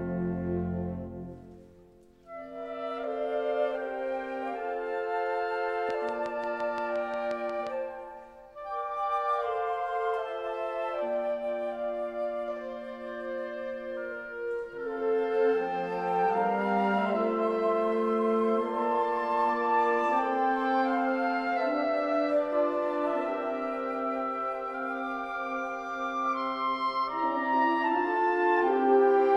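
From 5.90 to 7.68 s a train of clicks ticks over the sound at a steady 5.7 per second, about ten in all, peaking roughly 10 dB above the audio, likely from interference or a faulty connection. A spectrogram shows evenly spaced thin vertical broadband lines, and a waveform shows matching narrow spikes.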